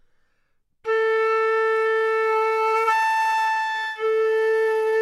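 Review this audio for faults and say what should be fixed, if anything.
From 3.07 s to 5.01 s the sound drags and stutters with repeated stalls (stutter): 34 brief holds, none longer than 14 ms, together about 17% of that span. Packets arrived too slowly, so the jitter buffer kept emptying and the receiver stretched the last sound until data resumed, losing nothing. A deeper or adaptive jitter buffer and a steadier network path would prevent it.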